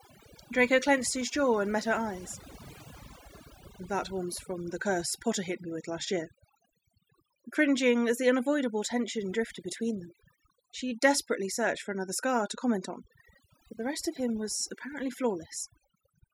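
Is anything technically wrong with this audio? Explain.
Yes. Overdone noise removal runs throughout this speech. The reduction is set too strong, so bands near the noise floor are cut. Pauses drop and break up into twinkling specks. Quiet parts of the voice are cut along with the noise.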